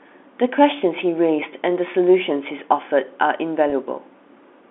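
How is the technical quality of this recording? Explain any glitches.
One glitch stands out, a brief packet loss with pitch repetition at about 3.7 s, heard over a telephone-band line consistent with G.711 coding, with energy confined to roughly 250 Hz to 3.5 kHz.

At 3.7 s, about 20 ms of audio went missing, which fits a single lost packet. The receiver filled the gap by repeating the last pitch period it had. Because the gap is short, it sounds like a momentary held, slightly buzzy tone rather than a dropout. On a waveform, the repair shows as a run of repeated cycles. On a spectrogram, the harmonics run briefly flat and frozen before normal movement resumes.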